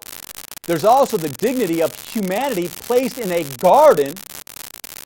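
A marginal data line in this speech clip has an unreliable data bit that flips in a random share of samples throughout, each error a fixed-size spike of about -7 dBFS. The result is a constant crackling fizz that sits under the speech and carries on through the pauses.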